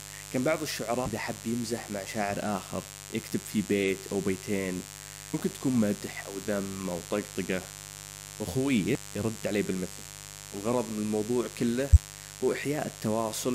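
A mains buzz runs through the whole speech clip. It is a steady, raspy 50 Hz hum, about 15 dB below the speech. Sharp switching spikes leak in twice per mains cycle. Their harmonics stack up into the kilohertz range.

Compressed frames are skipped at 1.06 to 1.08 s, 5.33 s, 8.95 s and 11.90 to 11.97 s. The decoder drops whole frames. The audio jumps ahead by about 150, 100, 100 and 70 ms.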